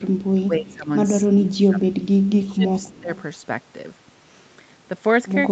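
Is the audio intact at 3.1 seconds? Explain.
No. Speech suppressed in double talk runs from 1.24 to 3.1 s: the echo canceller likely mistook overlapping talk for echo, so the voice dips by up to about 15 dB in pieces. An echo leak spans 2.25 to 3.22 s, likely from one side's canceller missing loudspeaker pickup, leaving a faint copy about 30 dB down, delayed about 0.25 s.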